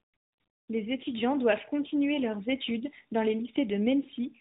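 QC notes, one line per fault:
Throughout, tandem speech coding: G.726 then AMR-NB at 10.2 kbit/s, the later coder re-coding earlier damage, so speech sounds rough and muffled; spectrogram empty above 3.8 kHz.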